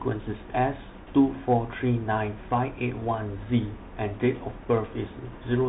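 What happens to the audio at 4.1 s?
At 4.1 s the speech is still inside the Bluetooth CVSD headset codec damage, which runs through the whole clip. Each sample is a single up-or-down bit with an adapting step. Nothing passes above 3.8 kHz. Sibilants turn scratchy over a granular hiss.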